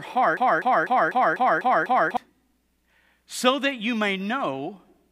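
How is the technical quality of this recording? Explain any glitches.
The recording has one clear glitch. From 0.37 to 2.17 s, a broken-record loop takes over the speech. A fragment of about 0.25 s repeats seven times, back to back. The likely cause is a stalled player or stream resending its last buffer. The speech meant for that stretch is lost.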